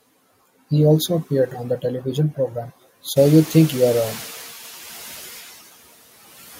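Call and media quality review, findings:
Background noise swells at 3.16 s and comes through under-reduced, sinking by about 4 dB over 1.18 s to 4.34 s. Noise suppressor catching up: room noise jumped about 15 dB near 3 s, and the suppressor's noise estimate lagged before adapting.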